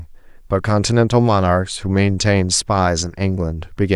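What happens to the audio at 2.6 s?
Nothing goes wrong at 2.6 s; the speech carries on intact through that moment with no dropout, click or other fault.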